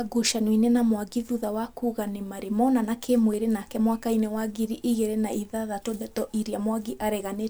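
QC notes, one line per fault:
3.34 s and 4.41 s, dropped samples: two isolated sharp clicks in the speech, the first right after "nĩ marĩ monana kĩ" and the second just before "ngiri igĩrĩ na ithathatũ". Each is a single thin vertical line across the spectrum with no audible gap. The likely cause is a fraction of a millisecond of samples missing from the stream. The waveform jumps straight from one value to a later one, and that step discontinuity spreads energy across all frequencies as a brief click.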